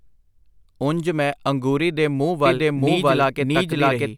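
From 2.46 s, right after "ਮੈਂ ਅੰਗੂਰੀ ਦੇ ਮੂੰਹ", a doubled audio track cuts in abruptly: a dry, equally loud copy trailing about 0.7 s behind, likely a slower second capture, until the end.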